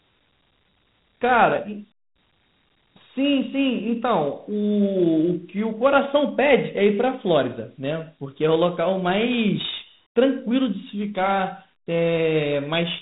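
A speech recording with Dialogic VOX ADPCM damage running through the whole clip. Nothing is left above about 3.8 kHz, and a plainly audible gritty hiss rides on the speech and swells and fades with it. That level-following grit sets it apart from a simple telephone band-limit: the 4-bit adaptive step size cannot track the waveform closely, and the resulting roughness fits a 32 kbps OKI-style ADPCM stream.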